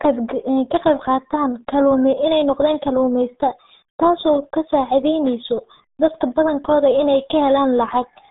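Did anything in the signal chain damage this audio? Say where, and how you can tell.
Yes, at the codec stage, throughout: RealAudio 14.4 damage. Nothing survives above 3.8 kHz, the band sits near 150 Hz to 3.7 kHz, and the speech is muffled and gargly, which fits an 8 kbit/s coder. A plain telephone filter would narrow the band without adding that bubbling smear.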